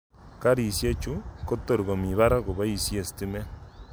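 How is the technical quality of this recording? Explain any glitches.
No audible glitches or faults.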